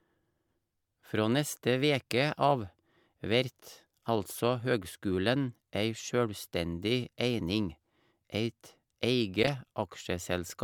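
Corrupt frame decoded at 9.43 to 9.49 s: flipped bits in around two compressed frames misplaced energy across frequencies, giving a brief burst peaking at about -10 dBFS.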